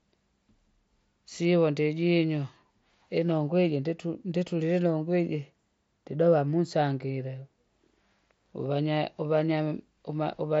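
No technical faults are audible.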